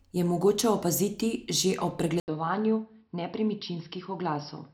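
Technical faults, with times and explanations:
2.20–4.73 s, input switched to a poorer device: right after "mogoče opaziti že ob" the speech breaks for 80 ms, then returns duller, boxier and a few decibels quieter, over a faint new background hiss. The likely cause is recording moving to a lower-grade microphone or headset profile. On a spectrogram, energy above 5.6 kHz disappears from the switch onward. On the waveform, a short flat gap precedes a slightly smaller envelope.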